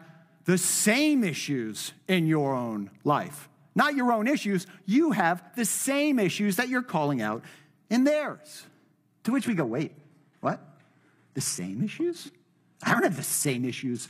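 Adaptive stream at a lower bitrate: at 9.32 s the speech suddenly loses its treble, with nothing above 12.3 kHz, and turns thin to the end. The player switched to a lower-quality stream mid-playback without a gap, which fits a drop to low-rate HE-AAC.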